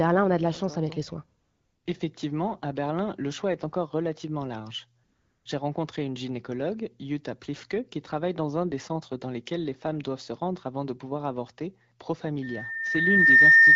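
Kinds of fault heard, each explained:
AMR comfort noise: Twice the phone treated the talker as silent and stopped sending speech frames, after "chance avec les soins" (1.41 to 1.85 s) and "est encore relativement large" (5.03 to 5.45 s). The receiver filled each gap with smooth synthetic noise standing in for the real background.
Loudspeaker feedback squeal: From 12.42 s to the end, the microphone picks up its own loudspeaker and the loop gain passes one at 1.8 kHz. That tone swells over about a second into a squeal roughly 15 dB above the speech.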